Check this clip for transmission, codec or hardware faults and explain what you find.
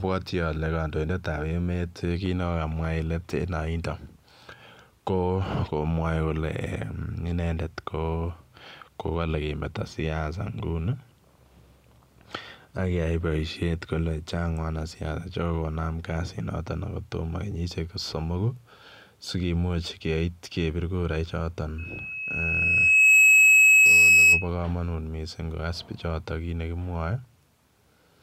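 One fault is audible, on the hardware side. A loudspeaker feedback squeal runs from 21.78 to 24.48 s, ending just before "kamanut missing kogas". The microphone picks up its own loudspeaker, and at 2.6 kHz the loop gain passes unity. That pure tone swells over roughly a second and a half into a squeal some 15 dB above the speech.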